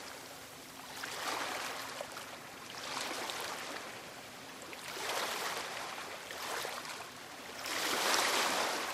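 Nothing in the audio stood out as a technical fault on listening.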